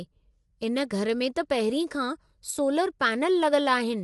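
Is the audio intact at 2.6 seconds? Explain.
No. A channel drops out from 2.51 to 2.59 s, ending just before 2.6 s: the sound falls abruptly by about 6 dB, likely because one stereo channel was lost before the mono sum, visible as a brief step down in waveform height. Throughout, low-delay AAC compression, likely AAC-ELD at a bitrate that fits 32 kbps, leaves plainly audible grainy roughness, with a spectrogram showing noise between the harmonics and nothing above 11.6 kHz.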